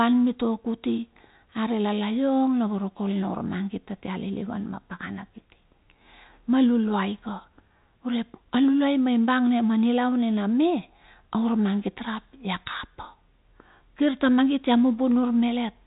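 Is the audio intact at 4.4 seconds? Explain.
Yes, at 4.4 seconds the speech runs through intact, with no dropout, click or other fault, only the narrow telephone band of G.711 coding with nothing above about 3.8 kHz.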